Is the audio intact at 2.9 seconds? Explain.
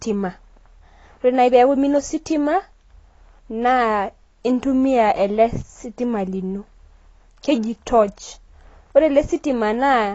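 No. At 2.9 s, as throughout, the speech is dull and fizzy, likely from AAC compression at a low bitrate around 24 kbps; a spectrogram shows a hard ceiling at 8 kHz.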